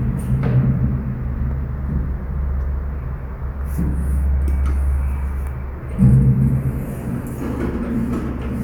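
No technical faults can be heard anywhere in this audio.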